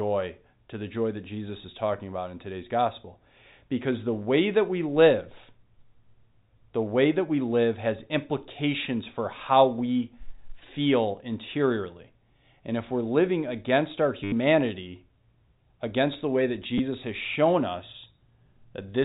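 At 14.24 s the speech breaks into a short robotic stutter lasting 80 ms, to 14.32 s. This is packet loss with the last packet repeated. Audio went missing, and the receiver replayed its final good chunk until fresh data arrived. The loops do not match the pitch, and the run buzzes at about 100 Hz, which fits 10 ms packets. A single 10 ms repeat at 16.78 s gives a small blip over the band-limited G.711 telephone sound.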